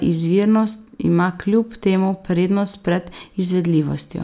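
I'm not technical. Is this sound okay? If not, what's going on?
Yes, it sounds fine, and there's nothing going wrong in it that you need to worry about.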